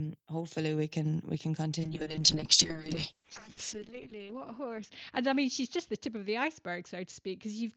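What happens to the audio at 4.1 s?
At 4.1 s the speech is inside a call bitrate drop that starts at 1.81 s and runs to the end of the clip. The encoder was pushed from 32 kbps down to 6 kbps, so it codes the speech far more coarsely and narrows the band from 20 kHz to 8 kHz. The result is muffled, watery, rough-edged speech. On a spectrogram the energy above 8 kHz vanishes under a flat ceiling, and the remaining harmonics look smeared and blocky.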